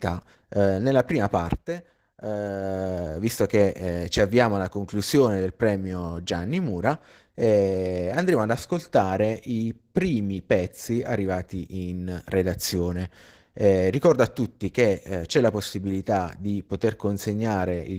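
Opus voice compression runs through the whole speech clip, its damage plainly audible. The high band is kept but coded coarsely, as hybrid Opus does above 8 kHz at a rate near 16 kbps, so the problem is coarse coding of the sound itself rather than a narrowed band.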